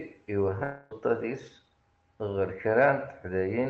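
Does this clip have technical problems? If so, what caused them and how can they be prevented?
Yes. From 0.63 s to 0.93 s the sound turns into a smeared, fading buzz that stands in for real audio. This is most likely a long network dropout: for roughly 0.28 s nothing arrived, and the receiver's concealment stretched the last received sound across the gap instead of going silent. When real audio resumes, the lost stretch is simply gone. The Opus call path limits the band to about 8 kHz throughout. Preventing it means stabilising the network link, for example with a wired connection, less competing traffic, or forward error correction and redundancy enabled in the call settings.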